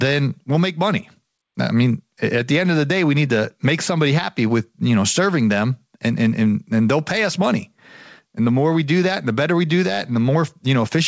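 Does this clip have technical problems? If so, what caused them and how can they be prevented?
No, this clip has no technical problems, so there is nothing to prevent.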